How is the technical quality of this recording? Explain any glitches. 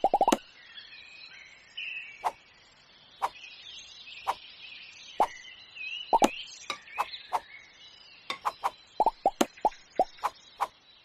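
Nothing stood out on listening to the recording; no glitches or technical problems were apparent.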